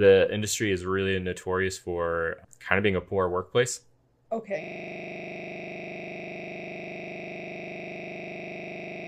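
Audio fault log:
4.64 s to end, system hang loop: the playback system froze while the sound hardware kept cycling one 40 ms stretch of buffered speech, repeating it exactly more than a hundred times until the clip ends. Repeating every 40 ms gives a rough, mechanical 25 Hz buzz in place of speech. On a waveform, an identical 40 ms shape tiles end to end. A spectrogram shows a frozen spectral slice broken into vertical stripes 40 ms apart, with harmonics spaced 25 Hz apart.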